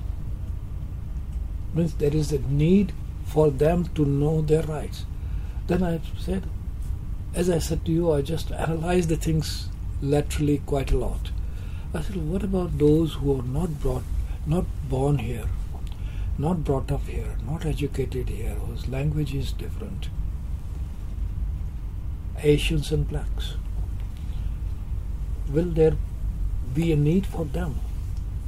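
No technical faults can be heard anywhere in this recording. Nothing in the audio calls for a timestamp or a note.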